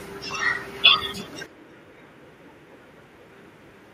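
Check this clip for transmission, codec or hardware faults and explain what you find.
Two faults are audible in this speech clip.

Echo with no canceller runs throughout. A far-end loudspeaker feeds the talker's voice back into a microphone with nothing subtracting it, so every phrase returns about a third of a second later as a faint, thin copy, about 30 dB down.

Input switched to a poorer device, from 1.46 s to the end. The input most likely changed to a lower-grade microphone or a headset call profile. The band narrows, so the voice turns dull and boxy. The level falls by roughly 10 dB, and a new noise floor appears about 30 dB below the speech, with no gap at the switch.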